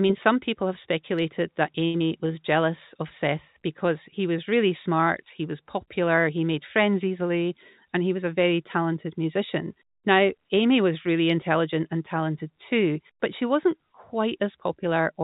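At 1.86 s a short stall from a late packet holds the speech for 78 ms, to 1.96 s. The last sound is stretched with a slight buzz or dip, then resumes exactly where it stopped. Unlike packet loss, no speech is missing, only drawn out.

Just after, from 1.98 to 2.02 s, a short concealed packet loss leaves a brief smear. About 60 ms of speech never arrived and only 23 ms of synthetic continuation covers it. Unlike the stall before it, this skips real content, so a small part of a sound drops out.

From 14.77 to 15.21 s a jitter buffer speed-up runs the speech at 108% of its pace. About 40 ms, in total, of short pitch-period pieces is cut out to reduce excess delay. It sounds hurried, yet the pitch stays the same. That separates it from a simple playback-rate change, and it is a continuous squeeze rather than a single gap. The G.711 A-law call path keeps everything below 4 kHz.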